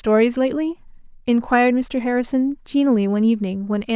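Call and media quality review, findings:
No faults found in the call and media quality review.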